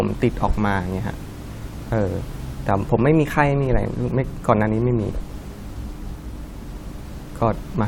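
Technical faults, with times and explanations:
No technical faults are present in this speech recording; the only other sound is room noise sitting about 21 dB below the speech, which belongs to the recording space rather than the system.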